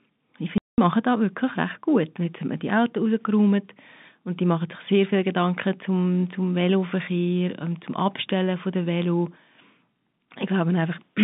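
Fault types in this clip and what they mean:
Packet loss filled with silence: a hard-edged 200 ms hole at 0.58 s, just before "machen da wirklich recht", where lost packets were replaced by silence.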